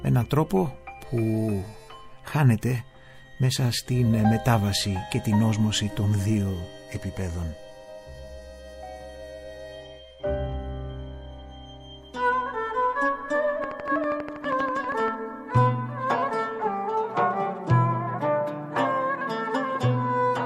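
Something, likely interference from nearby equipment or a faulty connection, injects a regular pulse into the audio from 13.64 to 15.09 s. The result is a train of clicks at a steady 12.5 per second, about twenty alike ticks standing roughly ten decibels above the surrounding sound.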